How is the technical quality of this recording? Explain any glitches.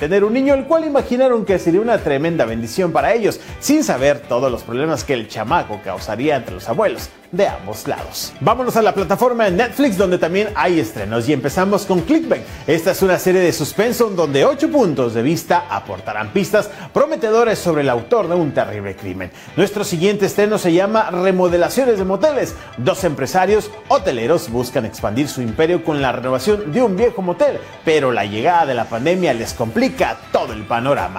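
Nothing in the recording stands out as a glitch, so there's nothing to explain here, and the technical quality gives no cause for concern.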